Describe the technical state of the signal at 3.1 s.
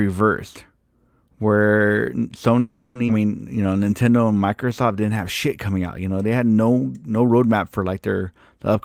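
At 3.1 s the signal shows a skip ahead, spanning roughly 3.07 to 3.11 s. About a fifth of a second of speech never reaches playback. Later audio was already queued, and the skipped stretch was discarded in transit or when the jitter buffer overflowed. Playback jumps forward, bridging the cut with only about 10 ms of fill. The two sides of the speech butt together almost directly, so a fragment of the utterance simply vanishes with an abrupt forward lurch.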